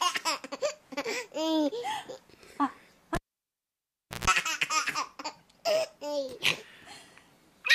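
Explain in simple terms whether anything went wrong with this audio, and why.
Something did go wrong: at 3.15 seconds a cable was pulled and plugged in again while the sound was still running. There is a sharp pop as the connection breaks, then almost silence for about 1.08 seconds. As the plug goes back in, only its tip touches first, so a 60 Hz mains buzz leaks through for about 0.14 seconds. A second pop follows, and the sound returns at 4.27 seconds.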